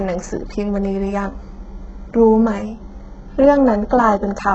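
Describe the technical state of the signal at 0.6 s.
At 0.6 s the speech carries damage that runs through the whole clip. Nothing is present above about 7.9 kHz. The treble that remains sounds synthetic. Sibilants come out gritty and metallic, lisped. The damage is heavy. The likely cause is HE-AAC compression at a very low rate, around 8 kbps. That codec keeps only the lower spectrum. It fakes the top by copying lower bands upward, so harmonics there do not line up.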